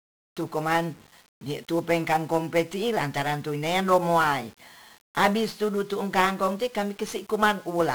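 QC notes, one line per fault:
throughout: 1-bit DFPWM compression. The speech is coated in heavy broadband fuzz and crackle, with the upper treble sunk under a constant hiss. Each sample is reduced to a single up-or-down step that nudges an adaptive level toward the waveform, so the reconstruction zigzags around the true signal and the error spreads across the whole spectrum. The density of that grit fits a one-bit stream at about 48 kbps. The noise rides through the smooth fade-in at the very start.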